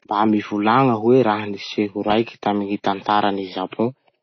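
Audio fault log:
Throughout: AAC compression, likely at a low bitrate around 24 kbps, cuts everything above 6.4 kHz, leaving speech dull with smeared, fizzy, plainly audible codec damage.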